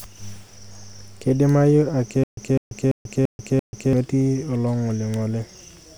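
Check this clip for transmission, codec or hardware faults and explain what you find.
One transmission fault is present in this speech. Stutter with silent gaps, 2.24 to 3.93 s: the stream likely stalled, replaying a 0.2 s fragment five times, each followed by about 0.14 s of silence, with the missing audio lost.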